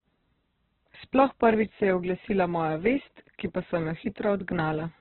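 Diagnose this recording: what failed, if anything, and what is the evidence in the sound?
The speech sounds muffled and grainy throughout, with nothing above about 4.1 kHz and a rough, noisy texture on tonal sounds. This is likely Opus compression at the codec stage: a very low rate, near 8 kbps, narrows the band and fills starved bands with noise.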